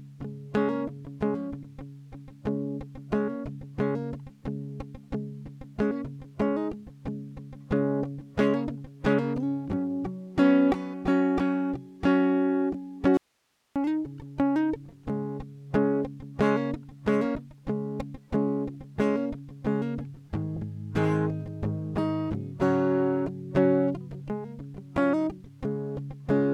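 At 13.17 s the music drops out abruptly and doesn't return until 13.76 s, so a little under 0.6 s goes missing. What's left in the gap is just hiss, sitting at about 45 dB below the music, so the path clearly stayed live while the signal itself vanished. That hard cut in and out is the giveaway for an audio dropout to a faint residue, likely from the source briefly disconnecting upstream while everything downstream kept running.

Then at 17.35 s there's a quick smeared blip where the music seems to jump forward slightly, around 50 ms of material gone. That's compressed frames skipped: the decoder never played a couple of whole frames, either because they were missing or because it rejected them as corrupt. The size of the jump fits frames of 26.1 ms, and because adjacent frames overlap, the join sounds like a soft smudge instead of a sharp click.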